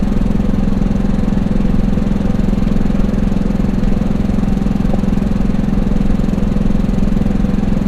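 From the start and throughout, the audio sounds dull and plainly gurgly. The top end is missing, and the upper region flickers as if parts of it switch on and off. What remains has a coarse, granular edge. The likely cause is MP2 compression at a low bitrate, one that fits roughly 80 kbps. With so few bits to share among its sub-bands, the encoder drops upper bands entirely and quantises the rest crudely.

From 4.94 to 5.07 s, a short burst of DAB burbling breaks through. Bit errors from weak reception, at a rate of only a small fraction of a percent, slipped past error correction into the MP2 data. Corrupted samples then put short blips of noise into single sub-bands. The burst hits eight frames.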